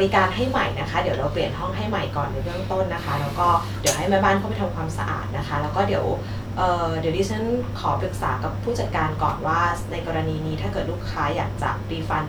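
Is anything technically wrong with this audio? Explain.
No, nothing in this speech recording shows a technical fault.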